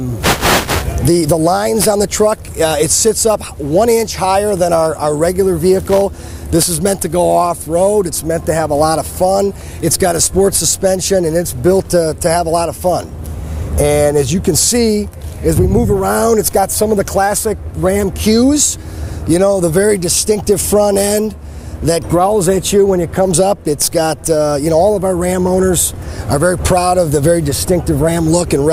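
No technical fault can be heard anywhere in the audio; the signal holds steady throughout, with no dropouts, distortion or interruptions to the sound.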